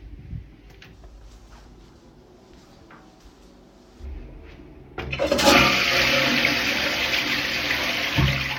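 Nothing technically wrong turns up anywhere in this recording of sounds, so there's nothing here to flag.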